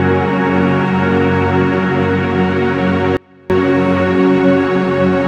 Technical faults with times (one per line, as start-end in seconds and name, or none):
3.17-3.50 audio dropout to a faint residue